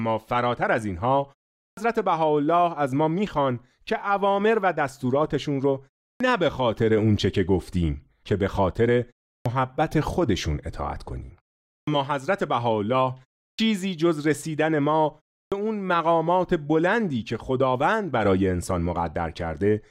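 Speech with a clipped start after a pause at 1.68, 6.11, 9.35, 11.77, 13.48 and 15.43 s: after silences of 0.3 to 0.44 s, the output device seems to need time to wake, swallowing 88 to 106 ms of each onset. Waveform and spectrogram show speech beginning abruptly, without a gradual rise.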